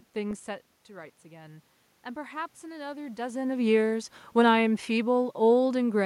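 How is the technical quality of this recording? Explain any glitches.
The recording has two automatic gain faults, one after the other, and the first is a reaction to the speaker moving away from the microphone.

Automatic gain rising, from 0.91 to 3.29 s: around half a second in, the speaker moves away and the level at the microphone drops by about 13 dB. The gain control then creeps its gain up by about 4 dB over more than two seconds. The voice and the room noise swell together, which gives an audible upward drift in level and background.

Automatic gain falling, from 3.49 to 6.01 s: around 3 seconds the speaker moves again, and the control finds the input too loud, or its background noise too strong, for the raised gain still in place. The control then eases its gain down by about 4 dB across the final two and a half seconds. The speech sinks steadily, with the room noise dropping along with it.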